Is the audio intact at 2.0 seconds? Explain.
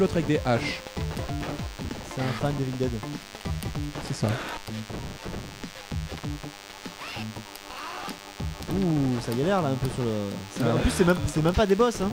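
No. At 2.0 s the audio carries DECT cordless phone buzz, which runs through the whole clip rather than appearing at that moment alone. A nearby DECT handset or base station sends a short radio burst every 10 ms, and the audio circuitry rectifies that RF energy into the signal path. The result is a steady buzz at a 100 Hz repetition rate with many harmonics, sitting roughly 20 dB below the wanted signal.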